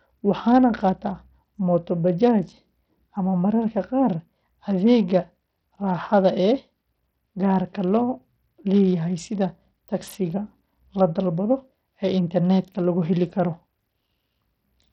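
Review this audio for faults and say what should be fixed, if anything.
Bluetooth SBC compression is audible throughout the speech. The treble is thin and flickers in and out. A gritty, grainy noise clings to the sound. Metallic aliasing rides along with it. The damage is heavy, which fits a very small bit pool, around 64 kbps. At that rate the upper sub-bands are starved of bits. What remains is quantised coarsely. This is likely an SBC Bluetooth link. To prevent it, record over a wired connection or a higher-quality codec.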